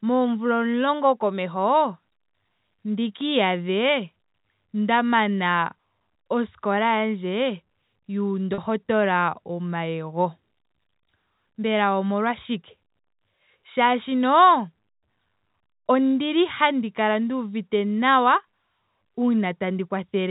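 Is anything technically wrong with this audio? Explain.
Yes. Packet loss with pitch repetition occurs at 8.54 to 8.58 s. 40 ms of audio went missing, which fits two 20 ms packets, and the receiver bridged the gap by repeating the last pitch period. Because the gap is short, it sounds like a brief held, buzzy tone rather than silence, heard within the telephone band of the G.711 coding.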